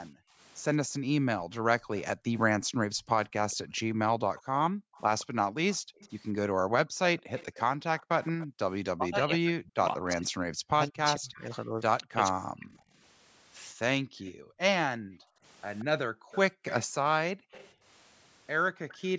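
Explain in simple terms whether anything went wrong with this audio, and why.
Several things went wrong, all tied to the echo canceller on a speakerphone call.

Background gated by the echo canceller: From 0.1 to 8.59 s, and again from 14.01 to 18.82 s, the room sound keeps dipping. Sometimes it goes almost silent. The canceller turned the microphone down hard while the loudspeaker played. Together these dips add up to roughly five seconds.

Echo leak: From 1.97 to 9.66 s, and from 12.73 to 18.98 s, you hear a faint second copy of the speech trailing about 178 milliseconds behind. It is a little louder in the later stretch. The likely cause is the canceller missing part of the loudspeaker sound, which then got sent back.

Speech suppressed in double talk: Between 8.96 and 12.71 s, the speech drops out in pieces, sometimes almost completely, for about three seconds in total. Both sides were likely talking at once. 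The canceller could not tell the talker from the echo, so it turned both down.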